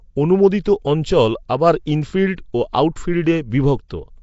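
A short speech recording whose whole length carries plainly audible codec damage: a rough, hissy halo around the voice, a smeared, underwater quality, and nothing at all above 7.7 kHz. The likely cause is Nellymoser compression, the old Flash microphone codec, which spends a fixed small budget on each block and fills starved bands with noise; the harshness fits a bitrate around 32 kbps. On a spectrogram this shows as a hard ceiling at 7.7 kHz with blotchy, noise-filled patches between the speech harmonics. At 0.64 s there is a pre-echo: a sharp onset is preceded by about 16 ms of hiss, so the attack sounds softened rather than crisp. The codec spreads its quantisation noise across the whole transform block, and the noise meant for the loud attack spills into the quiet moment just before it. A waveform shows a low fuzzy smear ahead of the transient, and a spectrogram shows a broadband haze before the attack.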